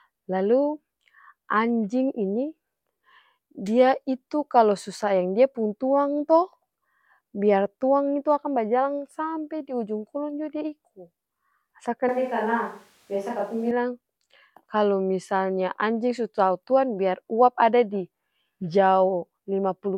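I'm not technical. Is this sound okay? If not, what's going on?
No. There is a switch to a distant microphone from 12.09 to 13.71 seconds, about a second and a half. The speech suddenly turns roomy and hollow, with less of its deep, full tone, and a faint background noise becomes noticeable, though the loudness stays about the same. This likely happens because the close microphone's signal dropped out and a microphone further away filled in, which picks up more of the room. The sound then snaps back just as abruptly.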